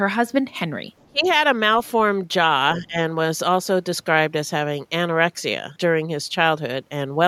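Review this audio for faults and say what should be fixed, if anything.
A faint second voice, the other side's voice leaking through, appears at 0.99 to 1.05 s and again at 1.26 to 1.33 s, roughly 30 to 40 dB below the main speech. It is likely loudspeaker echo the canceller left behind. On a spectrogram it shows as weak, separate harmonic traces, with almost no mark on the waveform. Better echo-path modelling or extra residual-echo suppression would remove it.

Speech suppressed in double talk shows as the speech dropping away from 1.07 to 1.26 s, by around 25 dB at its deepest, and from 2.81 to 3.0 s, more mildly at around 15 dB. Each lasts about a fifth of a second. This is likely the canceller turning everything down while both sides spoke. The waveform envelope pinches sharply, and the spectrogram thins or fades, especially at the top. More reliable double-talk detection, so the near talker is not attenuated, would prevent it.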